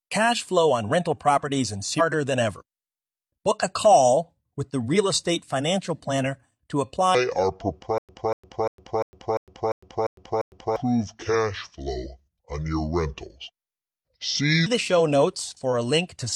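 At 1.95 to 2.01 s the speech jumps ahead with a small blip, likely a stream segment skipped. The waveform shows an abrupt discontinuity.

From 7.15 to 14.66 s a section at the wrong speed plays at 0.676 times normal, roughly seven semitones deep and slow. This is likely a clock mismatch, and the spectrogram's harmonics shift visibly downward.

Within that stretch, from 7.98 to 10.76 s, a stutter with silent gaps repeats a 241 ms burst eight times, every 347 ms, with 106 ms of digital silence between. The likely cause is a stalled player retrying. The waveform shows identical blocks separated by flat lines.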